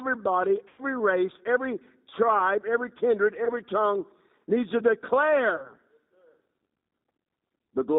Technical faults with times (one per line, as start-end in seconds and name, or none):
0.00-7.99 G.729 codec
0.68-0.82 VoIP packet loss concealed by the speech codec
3.45-3.50 VoIP packet loss concealed by the speech codec
5.56-5.75 VoIP packet loss concealed by the speech codec